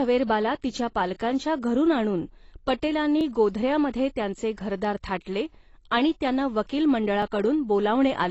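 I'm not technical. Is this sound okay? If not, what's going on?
No. There are two problems.

First, the recording was likely squeezed down with AAC compression, a method that shrinks files by throwing away detail the ear is expected to miss. Here it was squeezed hard, so nothing above about 8 kHz survives. The speech sounds dull and muffled, with a smeared, watery or fizzy texture, most noticeable on hissing sounds like s and sh, throughout the whole clip.

Second, the audio was handled in two-second pieces, and these are overlapping chunks: each piece starts a tiny bit before the previous one ends. At every join a sliver of about 7 milliseconds plays twice, which you hear as a small click or hiccup. It happens at 1.20 s, 3.21 s, 5.22 s (just after "त्यांचे घरदार") and 7.22 s (just after "आणि त्यांना वकील"), every two seconds.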